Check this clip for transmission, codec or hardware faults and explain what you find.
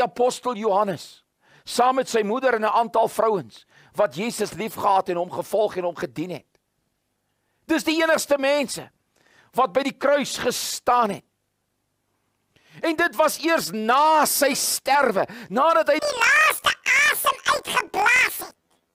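One fault, at the end. From 15.99 s to 18.94 s, planar audio read as interleaved: 24 ms blocks play twice, halved, so the sound jumps an octave with a 41.7 Hz buzz, visible as vertical striping on a spectrogram.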